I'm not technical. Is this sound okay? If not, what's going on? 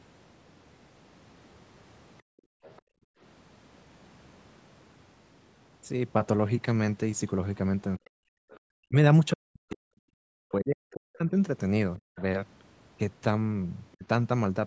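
No. Background gated by the echo canceller, from 2.22 to 3.21 s: the room sound drops to near silence while the call's loudspeaker plays, because the canceller clamped the microphone down.

Other side's voice leaking through, at 2.63–2.82 s, 8.51–8.59 s and 11.97–12.22 s: faint scraps of a second voice, likely loudspeaker sound the echo canceller failed to remove from the microphone.

Speech suppressed in double talk, from 7.98 to 11.34 s, then 11.98–12.19 s and 13.97–14.04 s: the voice dips and cuts out in pieces, likely because both sides spoke at once and the canceller turned everything down.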